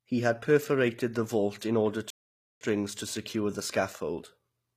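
Throughout, sibilants sound gritty and lispy, likely from HE-AAC compression rebuilding the treble from copied lower bands at a low bitrate. At 2.10 s, after "the vault in order", the sound goes silent for 0.51 s, resuming with "to secure the": a playback stall, likely the player starved of data.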